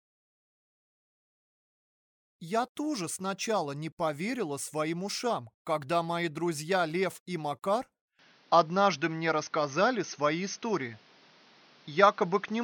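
At about 8.19 s the sound abruptly turns duller and boxier and stays that way to the end. Nothing comes through above 6.4 kHz, the level shifts by roughly 5 dB, and a new bed of background noise appears, sitting well below the signal at around 35 dB down. There's no gap at the change. The likely cause is an input switched to a poorer device, a narrower-band mic with its own tone and noise floor.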